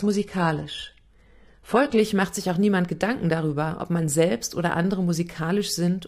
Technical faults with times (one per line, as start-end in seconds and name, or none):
0.00-2.00 adaptive stream starting at a low bitrate